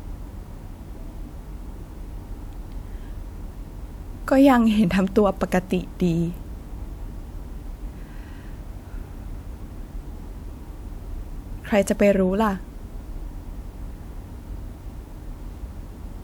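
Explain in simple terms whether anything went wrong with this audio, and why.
Nothing went wrong with this speech recording; listening through, nothing stands out as a technical problem. At no point does the sound break off, jump or change in a way that would point to a fault.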